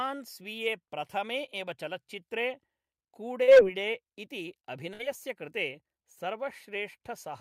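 At 3.43 s, running to about 3.49 s, there is a short concealed packet loss. Roughly 40 ms of the speech arrived too late for the decoder, and the receiver bridged the hole by extending the sound just before it, then crossfaded back into the real signal. It comes across as a quick smear or slight wobble rather than a gap. Unlike a burst, the stretch is too brief for any audible fade-out, and nothing afterwards seems to jump ahead.

From 4.93 s to about 5.01 s a burst of packet loss follows. This time around 60 ms went missing in a row, and the receiver filled about 57 ms of it by carrying the last sound forward while turning it down. The result is a held, fading tone or hiss, after which the speech resumes slightly further along with that portion gone. The decaying fill and the skip in continuity set it apart from the shorter, smoother repair at 3.43 s.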